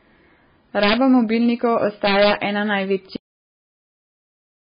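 Throughout the speech, the sound is watery and dull, with nothing above 5 kHz, most likely from MP3 compression at a very low bitrate, perhaps around 16 kbps. A spectrogram shows a flat ceiling at 5 kHz and flickering patches below it where weak frequency lines drop in and out from frame to frame.

Integer overflow strikes from 0.83 to 0.93 s and again from 2.07 to 2.31 s. Peaks pushed about 5 dB, then about 2 dB, past the limit wrap to the opposite sign instead of clipping, giving harsh cracks. On the waveform, peaks that should reach the top jump straight to large negative values, and the spectrogram shows vertical broadband streaks.

At 3.16 s a cut-off end stops the speech mid-sound, dropping straight to digital silence with no decay because the final buffers never played. The waveform ends abruptly in a flat line, and the spectrogram goes completely blank from that point on.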